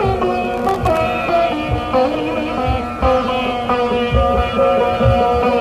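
From 0.54 to 0.97 s there is processor overload crackle. The processor falls behind and misses about twenty buffer deadlines over that stretch. Each buffer is under a millisecond, and each miss drops to silence. The sound tears into a gritty crackle, then clears.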